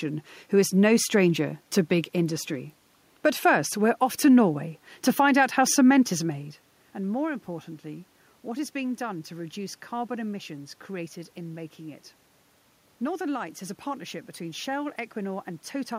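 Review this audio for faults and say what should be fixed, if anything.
A steady train of small clicks runs through the speech from 0.14 s to 15.92 s, repeating roughly every 70 ms, around two hundred in all. These are clock slip clicks, likely from two devices running on unsynchronised clocks about 300 ppm apart, so a single sample is dropped or repeated each time the drift adds up to one sample. On a spectrogram they appear as evenly spaced thin vertical lines. In the waveform each one is a one-sample step in an otherwise smooth cycle. To prevent it, lock both devices to a common word clock or add asynchronous sample-rate conversion between them.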